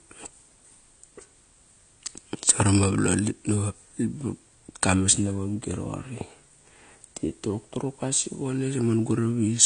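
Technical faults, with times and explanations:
Throughout, AAC compression: the speech sounds dull and smeared, with nothing above 9.9 kHz. It likely comes from low-bitrate AAC-LC, around 32 kbps.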